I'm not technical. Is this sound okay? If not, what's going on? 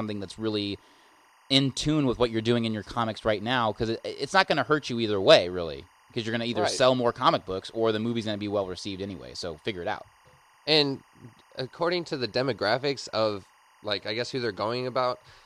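No. A faint, steady chirping warble sits behind the speech for the whole clip. That's timecode bleed: a timing signal from a nearby track or cable leaking in, flipping between two high tones around 1 and 2 kHz, and counting 24 frames a second.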